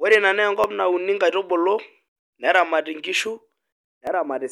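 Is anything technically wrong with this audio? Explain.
Yes. Between 0.64 and 4.07 s there are clock drift buffer slips. The likely cause is two devices each running on its own clock, one off by roughly a tenth of a percent, so the buffer between them drifts until a few dozen samples are dropped or repeated to catch up. This repeats about every 0.86 s, around five times, and each slip is heard as a regular click or tick in the speech.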